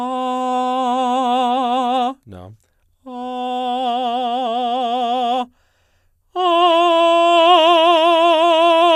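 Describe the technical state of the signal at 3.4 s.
At 3.4 s the music plays through intact, with no dropout, click, distortion or other fault at that moment.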